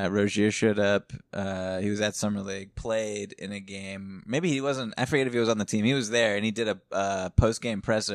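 No technical faults can be heard anywhere in this speech recording, which plays without any audible disturbance.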